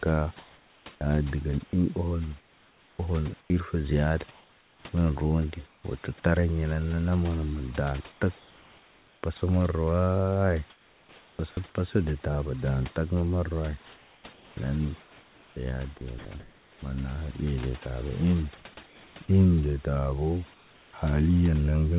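Throughout the clip, overdone noise removal is at work. A suppressor set too hard pushes whole frequency bands down whenever they sit near its noise estimate, taking quiet parts of the speech with them. The background drops and breaks up into twinkling specks.

From 0.38 to 5.84 s, ending just before "wo tut", comfort noise replaces the background, likely because discontinuous transmission stopped sending during pauses. The receiver's synthetic fill turns the real background into a flat, featureless hiss. The same swap returns at 8.12 to 9.23 s, at 10.7 to 11.39 s, at 18.86 to 19.16 s, and at 20.54 to 20.93 s right after "de tabo". In the last three the fill runs about 4 dB quieter than the real background.

Inside the first stretch, at 1.67 to 1.73 s, sound is dropped by the voice detector. The detector likely mistook the sound for background, so about 40 ms of it vanishes into the steady fill before the speech resumes.

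At 11.36 to 11.39 s, just before "pasa de tabo", the voice detector clips the onset. It likely reacted late, so 30 ms of the start were never sent, and the phrase begins abruptly without its soft lead-in.

From 13.85 to 16.82 s the voice detector chops the sound. It likely toggled between sending and not sending several times, so quiet syllables and word edges drop out into fill. The speech turns choppy.

Across the whole clip, nothing above 4 kHz comes through the call path, which fits a G.711 mu-law codec.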